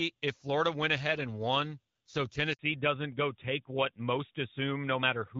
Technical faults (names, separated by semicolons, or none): handover gap; fallback to narrowband